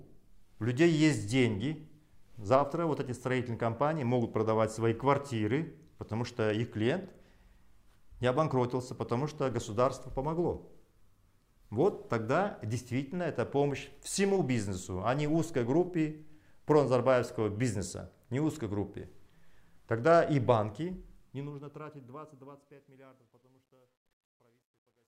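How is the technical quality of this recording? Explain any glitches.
The recording has one clear fault, confined to the closing fade-out. From 20.49 s to the end at 25.07 s, truncation distortion on the fade turns the decaying sound gritty. From 22.43 s onward it is at its worst. The fading level was quantized too coarsely without dither, which fits roughly 11-bit resolution, so the quietest stretch collapses into a few square steps.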